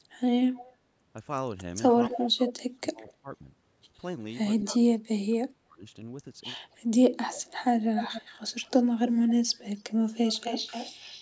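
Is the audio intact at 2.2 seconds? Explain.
No. An echo leak from 2.09 to 2.53 s, likely an incomplete echo cancellation, adds a copy 232 ms late at roughly 10 dB down, seen as faint repeated spectrogram striations. Speech suppressed in double talk from 2.09 to 3.27 s, likely from gating during overlap, dips the level by around 25 dB, visible as notches in the waveform envelope.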